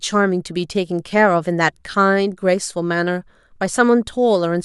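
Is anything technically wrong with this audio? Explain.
No, nothing technically wrong can be heard here.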